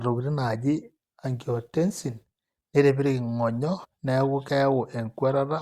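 At 3.83 to 3.85 s the speech has a brief glitch from damaged data in a compressed stream: corrupted bytes make the decoder misread frames and hunt for the next valid header.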